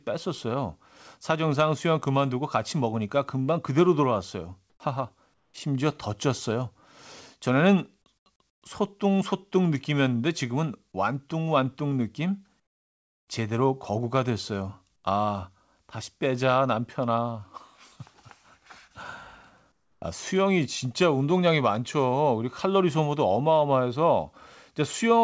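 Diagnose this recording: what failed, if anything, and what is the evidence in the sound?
Comfort noise in place of the background, at the call-processing stage. In pauses between speech, the real background gives way to a flat, featureless hiss at 4.70–4.80, 5.34–5.54, 8.18–8.26, 8.50–8.62, 12.60–13.28, 14.96–15.04 and 19.72–20.02 s. It is usually quieter, by about 4 to 18 dB, and once about 1 dB louder. The likely cause is discontinuous transmission: the sender goes silent and the receiver synthesises noise. The audio has nothing above 8 kHz, which fits a G.722 call path.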